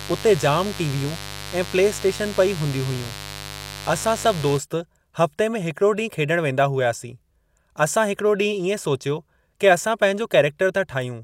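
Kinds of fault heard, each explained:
Mains buzz: from 0.0 to 4.58 s the speech sits over a steady, raspy 50 Hz buzz, fairly loud against the voice. Sharp switching spikes at twice each mains cycle, from something like a dimmer, rectifier or unshielded lead, spread harmonics of 50 Hz up into the kilohertz range.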